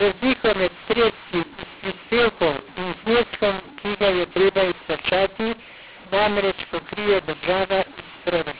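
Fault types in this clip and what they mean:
mu-law and A-law mixed up: the speech was encoded with A-law but decoded as mu-law, so sample levels are scrambled. The whole clip sounds harsh and distorted, and pauses fill with noise.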